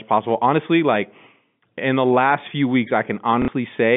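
At 3.42 s, just after "the last few weeks", there is packet loss with last packet repeated. About 60 ms is missing, which fits two 30 ms packets. The receiver replays the last packet to fill the gap. The result is a short, buzzy, robotic stutter lasting until 3.48 s, heard through the narrow G.711 telephone band.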